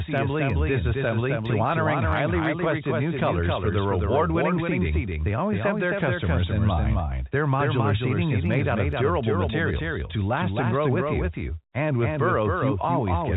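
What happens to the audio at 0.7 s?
At 0.7 s the speech is affected by a doubled audio track, which runs through the whole clip rather than starting there. A second, full-band copy of the same speech trails the original by roughly 300 ms at around 5 dB lower, with no decay or room colour. This gives a hard, slap-like repeat of each syllable. The likely cause is the signal being captured a second time through a slower path. The band stays limited to 4 kHz by the telephone coding.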